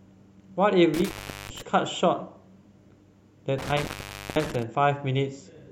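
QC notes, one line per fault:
0.94–1.61 s and 3.58–4.63 s, intermittent contact: the speech drops out for about 0.39 s and then 0.51 s as a loose connection opens. Crackle marks each break and faint hiss remains. The waveform shows near-flat gaps bounded by sharp spikes, and the spectrogram shows broadband vertical streaks at the edges.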